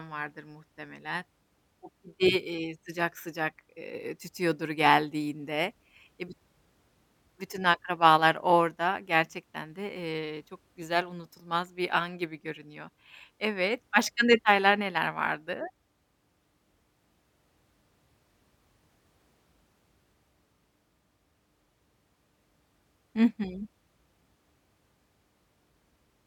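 Nothing to flag in this speech recording, since no technical faults turn up anywhere along the way.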